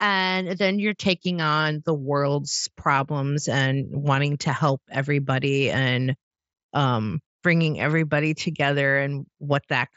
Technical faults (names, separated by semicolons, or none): none